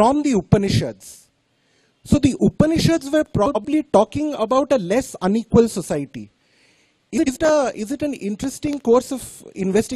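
At 3.46 to 3.65 s and again at 7.17 to 7.37 s, frames out of order swap two neighbouring blocks of about 93 ms, which fits runs of four frames. The result is a garbled flutter. Unlike a dropout, no time is lost.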